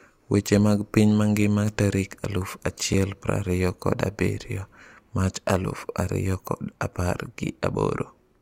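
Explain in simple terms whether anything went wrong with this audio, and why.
At 2.93 s the speech drops out for an instant. That is a gap between stream segments. Two pieces of the stream did not line up exactly. The player filled the space with about 4 ms of silence. Nothing was lost, just briefly paused.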